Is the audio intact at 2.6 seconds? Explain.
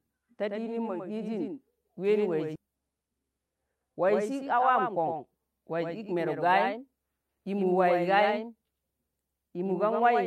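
No. A skip ahead occurs at 2.55–2.57 s: roughly 0.7 s of speech was dropped, likely because the jitter buffer overflowed while later audio was already queued. Playback jumps forward with no gap, so the two sides of the cut are joined almost directly.

A doubled audio track also runs through this moment. A second full-band copy of the speech, a few dB quieter, trails the original by about a tenth of a second. It is likely captured again by a slower path, and it has no room colour or decay of its own.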